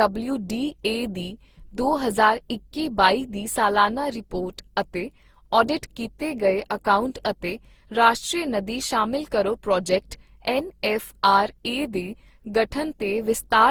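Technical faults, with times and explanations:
Throughout, generation loss: the speech sounds swirly, smeared and hollow, with blurred onsets, yet extends to 20.3 kHz, unlike a single starved encode. Likely around ten Opus passes near 48 kbit/s, each re-quantising on a shifted frame grid, stacking noise and spectral holes.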